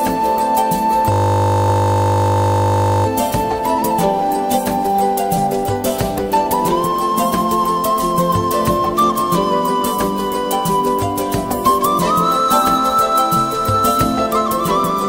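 From 1.12 s to 3.06 s, a system hang loop occurs: the computer or its audio driver stalled while the sound hardware kept replaying the same small stretch of its ring buffer. That 20 ms piece repeats nearly a hundred times, producing a steady buzz at 50 Hz rather than a stutter, which fits a very short buffer. When playback recovers, the sound carries on with little or nothing missing.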